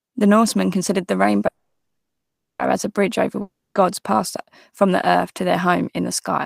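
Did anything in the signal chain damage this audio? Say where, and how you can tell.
Yes. At 1.47 s, after "considered the", the sound turns into a fading buzz, then silence, and resumes at 2.61 s with "as a bridge over". It's a call audio freeze, likely a network stall.

At 3.41 s, the sound again decays into buzz and then silence, returning at 3.77 s on "passed from earth to", with about 0.34 s gone. It's a long network dropout, likely lost packets.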